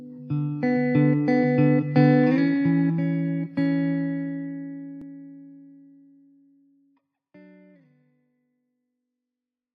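No technical faults can be heard, and the level eases down in a smooth fade-out that begins around 4 s and reaches silence at the very end, with no click or hard edge.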